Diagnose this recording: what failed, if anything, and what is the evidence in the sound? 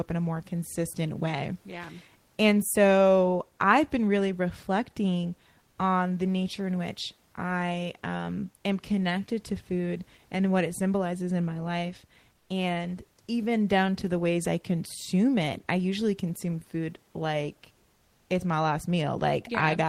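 Comfort noise in place of the background at 12.37–12.49 s and 17.95–18.29 s: room noise goes flat and slightly quieter, likely codec DTX filling pauses.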